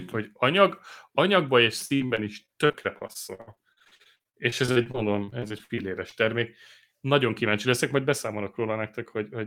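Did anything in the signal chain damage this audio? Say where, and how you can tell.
Yes. Between 1.85 s and 6.14 s, after "hogy anyag anyagban és" and up to "termék nagyon kíváncsi leszek", the speech turns choppy and robotic, with about 41 short holes, the longest 61 ms. This is repeated packet loss at the network stage. Packets kept arriving lost or late, and each hole was patched by stretching the last sound forward. Roughly a quarter of that stretch is concealed fill, giving the stuttering texture.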